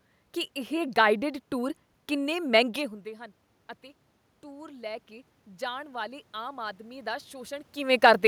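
Automatic gain rising runs from 4.41 to 7.62 s, starting after "ਮਹਿੰਗੇ ਹੁੰਦੇ ਹਨ ਅਤੇ". The input level had fallen by about 16 dB, so the gain control slowly added about 6 dB. The voice and the room noise swell together over those three seconds.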